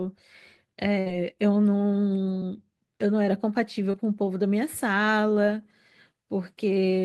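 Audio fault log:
0.99–1.08 s, burst of packet loss: a stretch of about 60 ms never arrived in time, so the receiver extended the last sound for roughly 63 ms while fading it down. This produces a held buzz or dying hiss, after which the audio jumps ahead with that portion gone.
2.40–2.43 s and 3.91–3.95 s, short concealed packet loss: about 20 ms went missing each time, and the decoder patched each hole with a synthetic continuation of the preceding sound before crossfading back. This leaves a brief smear or wobble, and a short consonant there can disappear.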